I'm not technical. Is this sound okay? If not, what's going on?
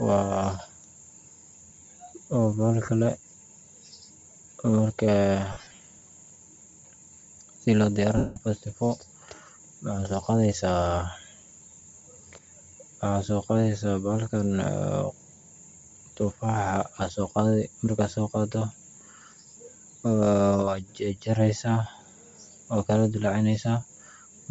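No. The sound passes through a wireless link, likely Bluetooth LC3 compression, which squeezes speech hard and rebuilds the missing upper detail from filler noise. Throughout the clip that gives the voice a breathy, grainy, hissy edge.

There are also lost LE Audio frames, where pieces of the wireless stream never arrived and the receiver patched the holes with guesses. At 2.86–2.88 s there is a tiny blip. From 5.52 to 5.80 s there are scattered dropouts, the longest about a twentieth of a second, heard as a choppy, smeared flutter. At 8.17–8.36 s one long gap turns into noisy mush and then fades toward silence.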